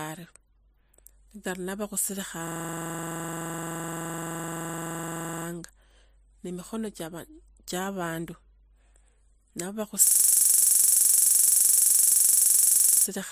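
A system hang loop runs from 2.48 to 5.46 s and again from 10.07 to 13.06 s. Each time the system stalls while the sound hardware keeps replaying one 42.7 ms slice, consistent with a 2048-sample buffer, so the speech freezes into a rapid, rattling stutter at about 23 Hz.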